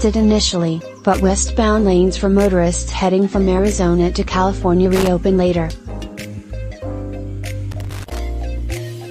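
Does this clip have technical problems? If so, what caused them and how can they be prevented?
Yes, there's loose connector crackle in two spots: a short burst from 4.95 to 5.07 s, and a longer one from 7.71 to 8.19 s, just under half a second. That irregular scratchy chatter is a worn or dirty contact shifting and rapidly making and breaking, chopping the audio, with pops from any DC on the line. To prevent it, clean or replace the suspect plug and jack, and strain-relieve the cable so it can't move.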